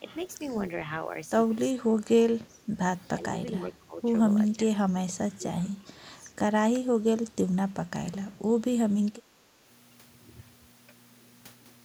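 Speech suppressed in double talk appears at 1.77–2.67 s, 3.15–4.13 s, 4.56–4.72 s, 4.88–5.44 s, 5.61–5.96 s, 6.13–6.32 s, 6.79 s and 9.11–9.56 s. The talker's level sinks in patches, by up to about 20 dB around 1.8 s and 5 s, and only slightly at 6.79 s and 9.1 s. This is likely an echo canceller that could not tell live speech from loudspeaker echo while both sides spoke, so it attenuated everything.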